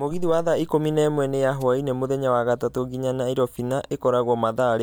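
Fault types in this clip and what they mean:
Wireless microphone noise hit: the microphone's FM radio signal fades as reflections cancel, letting receiver hiss surge over the speech; here a brief static swish from 1.60 to 1.63 s. Its noisy texture, not silence or one tick, sets it apart from a digital dropout.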